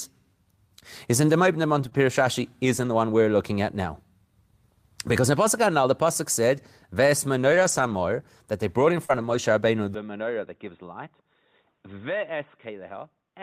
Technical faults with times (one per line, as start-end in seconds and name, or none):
1.81-1.95 lost packet rebuilt from error correction
1.89-1.93 short concealed packet loss
2.77-2.87 lost packet rebuilt from error correction
6.57-6.63 lost packet rebuilt from error correction
7.51-8.01 lost packet rebuilt from error correction
9.05-9.11 short concealed packet loss
9.09-9.35 lost packet rebuilt from error correction
9.94-13.43 input switched to a poorer device
12.15-12.25 lost packet rebuilt from error correction